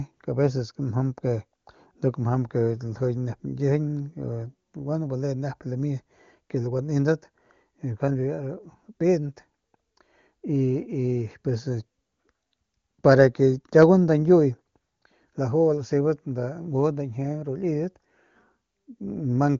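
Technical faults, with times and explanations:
No technical faults heard.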